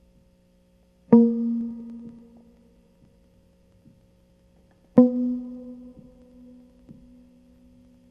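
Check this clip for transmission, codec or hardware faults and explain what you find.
Two faults are present in this music clip.

Periodic USB or driver dropouts run from 1.61 s to 8.04 s. A tiny slice of audio disappears every 0.096 s, around seventy times in all. Each loss is roughly 4 ms and is skipped outright rather than filled with silence. Something on the USB bus or in the audio driver is stalling the stream at a fixed interval. The result is a steady ticking or popping under the music, heard only while it plays.

DAB burbling appears briefly from 2.37 s to 2.41 s. Weak reception let bit errors slip past the error correction into the MP2 audio data, at a small error rate. Corrupted samples put short blips of noise into single sub-bands, and corrupted scale factors that get through make sub-bands jump in level for up to a frame. It sounds like a brief burble of noise laid over the music.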